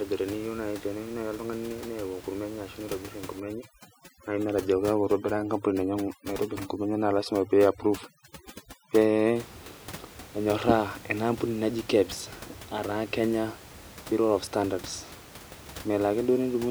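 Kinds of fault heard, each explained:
Overdone noise removal: From about 3.40 to 9.36 s, a noise reducer is clamping down far too hard. Wherever a frequency band sits close to what it thinks is noise, it gets pushed nearly to zero, and the quieter bits of speech get dragged down with it. The room noise, roughly 18 dB under the speech elsewhere, drops and breaks up into little twinkly specks until it lets go.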